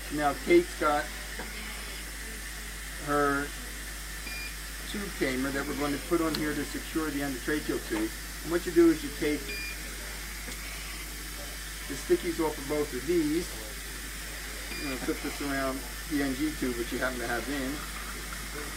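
Mains hum runs throughout: power-line interference at 50 Hz leaks into the signal, leaving a steady low drone only roughly 10 dB below the wanted sound.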